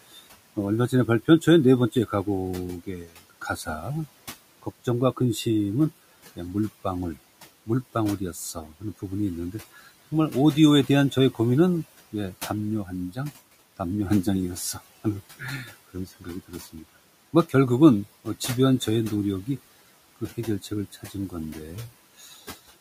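Across the whole clip the background drops away in the gaps and swells back under the speech. These are noise suppressor artifacts: the room noise, sitting about 20 dB below the speech, is pushed down by about 17 dB band by band, frame by frame.

From 0.02 to 9.88 s, soft consonants and word endings keep sounding swallowed, roughly a second of speech in all, sinking by up to about 19 dB. From 10.87 to 22.37 s the same happens over roughly one and a half seconds, with drops up to about 17 dB. This is speech cut by the noise suppressor: it mistook quiet speech for noise and turned it down with the background.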